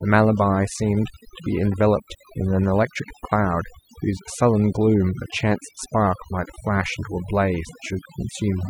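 Overdone noise removal runs throughout the speech. A noise reduction process set far too aggressively pulls individual frequency bands down hard, or shuts them off, whenever their level sits close to its estimate of the background noise. The background collapses into near silence dotted with twinkling, chirpy specks, and the quieter components of the voice are stripped away along with the noise.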